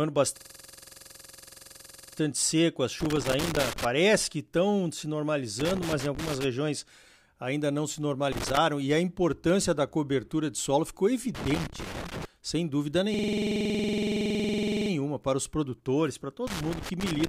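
From 0.37 to 2.18 s a system hang loop takes hold: the driver stalled while the hardware replayed one 46.4 ms slice, which fits a 2048-sample buffer, producing a rigid 21.5 Hz buzzing stutter. Its exact, unchanging repetition separates it from crackle. The same loop returns at 13.14–14.91 s.

Loose connector crackle appears at 3.00–3.85, 5.60–6.44, 8.32–8.57, 11.35–12.25 and 16.47 s to the end. A contact making and breaking chops the speech into scratchy bursts. Unlike the loop, these are irregular, with no steady rate.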